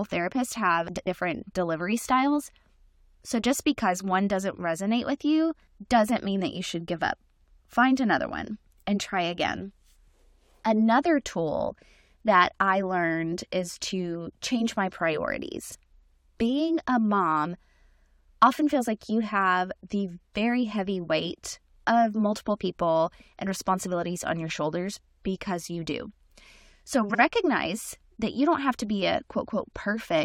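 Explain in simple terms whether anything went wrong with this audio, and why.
Three brief garbled flutters, at 0.88–1.07 s (after "therapists have", before "delivery styles"), 15.69–15.75 s and 27.09–27.20 s, are frames out of order: two short chunks of speech got swapped, so each spot plays with its halves exchanged, but nothing's missing.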